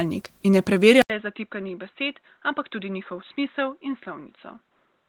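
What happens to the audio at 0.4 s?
Nothing goes wrong at 0.4 s; the speech there is intact, carried through light Opus voice compression that leaves it sounding full-band.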